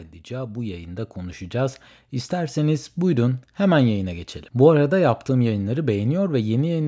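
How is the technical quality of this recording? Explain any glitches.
The recording has one clear glitch, automatic gain rising, near the start. From 0.28 to 2.94 s the level climbs by about 9 dB. The call's gain control judged the input too quiet and turned it up step by step. Speech and background noise swell together, so the room seems to creep closer. The rise settles just before "buyurun hemen yayına geçelim". The call's microphone processing also leaves nothing above 8 kHz.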